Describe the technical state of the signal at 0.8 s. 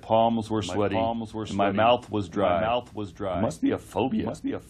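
A doubled audio track runs through the whole clip. A full-band copy trails about one second behind, roughly 5 dB quieter, likely from a second, slower capture path.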